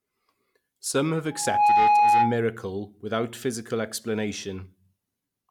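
From 1.31 to 2.44 s, an 830 Hz tone swells over about a third of a second to roughly 10 dB above the speech, then stops before "without physical". This is loudspeaker feedback squeal: the microphone picked up its own loudspeaker, and the loop gain exceeded one at that frequency.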